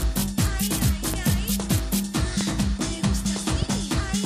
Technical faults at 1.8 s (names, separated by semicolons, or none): none